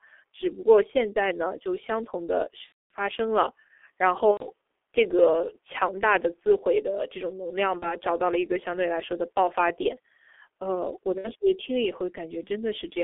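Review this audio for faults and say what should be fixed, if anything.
Muffled, hoarse speech with blurred consonants throughout comes from the G.723.1 codec: about 6.3 kbit/s, a 300 Hz to 3.4 kHz band, and a slowly updated voice model. Prevent it by using a wideband codec at a higher bitrate.

Stretched, fading stretches at 2.66–2.92 s, 4.31–4.46 s, 7.79–7.95 s and 11.18–11.30 s are VoIP packet loss concealed by the speech codec, which extrapolated lost frames. The longest gap fits about 240 ms of missing audio. Prevent it with forward error correction or packet redundancy and a stable network path.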